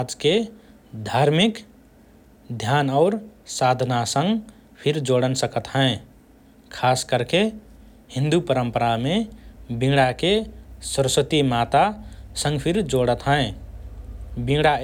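No technical faults occur anywhere in the recording, so there is nothing to describe in time order.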